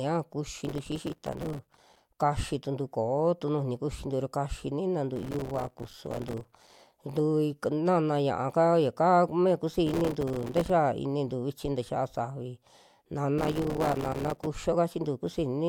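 Speech with four bursts of gritty, tearing crackle at 0.61–2.09 s, 5.16–6.92 s, 9.87–10.70 s and 13.38–14.46 s. This is processor overload crackle: many short buffers, around 3 ms each, miss their deadlines in a row, and each missed buffer drops to a hard-edged silent gap.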